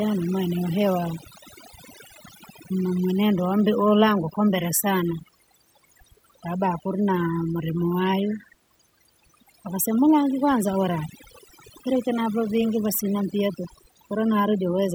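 From start to finish the speech carries overdone noise removal. Noise suppression set far too aggressively has been pulling individual frequency bands down to nothing whenever they sit near its noise estimate, and softer parts of the voice are lost along with the noise. Pauses fall to near silence dotted with twinkling specks. A spectrogram shows a speckled, patchy floor of isolated bright dots between dark gaps, and ragged, eroded edges on the speech harmonics.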